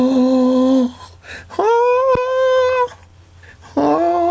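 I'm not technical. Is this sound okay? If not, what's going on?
No. Gain pumping runs through the whole music clip, likely from the input being set too hot with a fast limiter pulling it down: loud and soft parts end up squashed closer together in level. At 2.15 to 2.34 s there's a phantom power thump, a supply switched on or off on the live input, heard as a deep thud fading within a fraction of a second.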